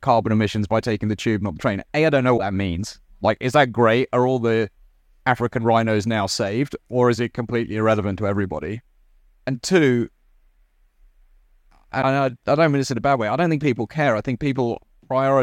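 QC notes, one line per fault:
2.37–2.41 s, broken MP3 bit reservoir: a lost frame likely left the next one decoding borrowed bits from the wrong frame, so the speech jumps ahead with a 40 ms glitch between "I don't know" and "that means".
12.01–12.04 s, broken MP3 bit reservoir: the same reservoir break, likely after a missing frame, leaves a 26 ms glitch, about one 24 ms frame, just before "I don't mean this".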